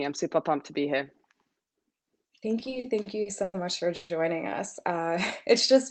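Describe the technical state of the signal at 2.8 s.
At 2.8 s the audio is inside a run of repeated stalls (stutter), from 2.59 to 3.56 s. Packets arrived late and the jitter buffer kept running dry. Eight times the last sound was stretched to bridge the gap, the longest 100 ms. Nothing is lost, but the sound drags and stutters.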